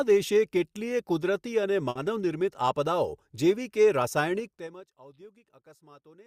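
At 1.89 s a burst of packet loss interrupts the speech: a short run of packets never reached the player in time. The receiver covered the hole by stretching the last sound it had for about 60 ms while fading it out, which is heard as a brief held buzz or hiss. Playback then resumes at 1.97 s, but roughly 60 ms of speech has been skipped, so the flow jumps forward slightly.

From 4.37 s to 4.92 s the level drops by about 25 dB in 3 dB steps instead of a continuous fade, which is zipper noise. Each jump in gain happens at once, putting a small discontinuity into the waveform. At roughly fifteen steps per second, these tiny clicks run together into a fine ticking or zipping layered on the speech for as long as the level is falling.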